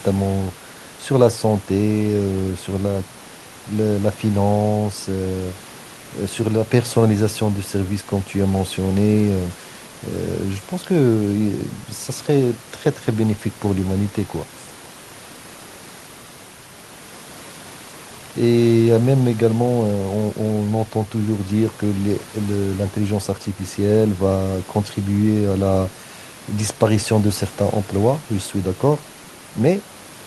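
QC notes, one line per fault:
No system faults are present in this speech recording; the room noise sits about 23 dB below the speech and belongs to the recording space, not the signal chain.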